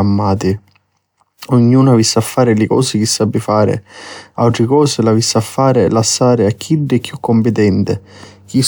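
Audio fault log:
No faults are detectable anywhere in the speech recording.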